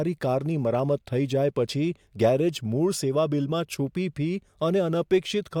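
No technical faults occur at any point in the speech, so there is nothing to describe in time order.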